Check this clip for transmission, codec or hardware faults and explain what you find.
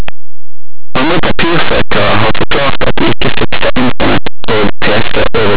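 One fault runs through the whole speech clip. Linear audio read as companded, throughout: linear 8-bit samples are decoded as mu-law codes, so values just on one side of zero expand to the largest outputs while those on the other side stay small, giving constant harsh distortion.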